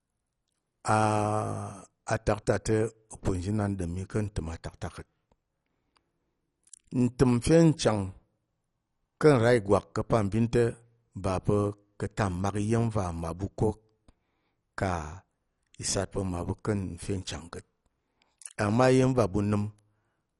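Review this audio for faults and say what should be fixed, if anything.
Throughout the speech the sound is dull, with nothing above 11.3 kHz, and a gurgling, granular roughness as upper bands flicker in and out. This is likely MP2 compression. Layer II divides the signal into 32 sub-bands and, when bits run short, switches off the top bands and coarsely quantises the rest. The plainly audible damage points to a low rate of around 48 kbps. To prevent it, re-encode from the original at a much higher bitrate or with a more efficient codec.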